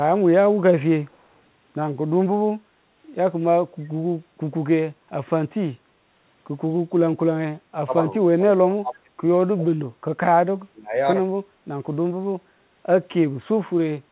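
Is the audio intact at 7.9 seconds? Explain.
No. From 7.86 to 7.94 s the speech dips by about 15 dB. This is likely speech suppressed in double talk, when the echo canceller could not separate its own talker from the loudspeaker echo and turned both down at once.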